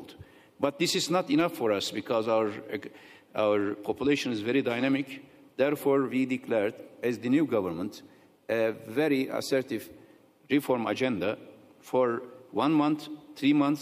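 Nothing stood out on listening to this recording.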